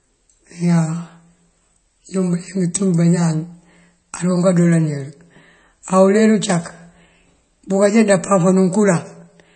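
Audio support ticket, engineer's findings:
Whole clip, speech: watery, swirly texture throughout; s sounds chirpy and metallic; consonant attacks smeared. Nothing above 8.3 kHz. Likely MP3 compression, at a bitrate consistent with roughly 32 kbps. Encoder short of bits, treble cut and weak frequency lines switching on and off frame to frame. Distinct from a simple low-pass filter: a filter would dull the top end cleanly, without this warbling, chirping residue in the remaining band.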